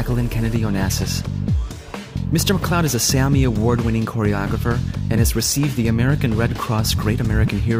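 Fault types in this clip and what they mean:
No technical faults can be heard in the signal.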